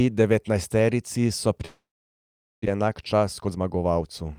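From 1.65 s to 2.68 s the speech cuts out. A short buzzy tail fades away, and then there is silence for most of a second. When sound returns, about 0.6 s of speech is gone. The likely cause is a long network dropout, where no audio arrived and the receiver filled the gap as best it could.

From 2.70 s to the end, the speech sounds hurried, running about 12% faster with no change in pitch. This is a jitter buffer speed-up. After the gap, audio piled up in the buffer, so the receiver cut out many tiny pitch-period slices, about a fifth of a second in total, to bring the delay back down.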